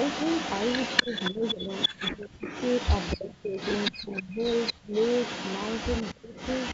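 From 0 to 6.73 s, an echo leak runs throughout. A delayed copy of the speech returns 244 ms later, roughly 10 dB below it. Likely a far-end loudspeaker echo the canceller missed.

Speech suppressed in double talk follows, at 1.01–2.45, 3.17–3.55, 3.92–4.41, 4.83–4.93 and 6.12–6.33 s. The talker dips sharply, by roughly 20 to 35 dB. Likely the canceller turning down its own talker along with the loudspeaker echo during overlap.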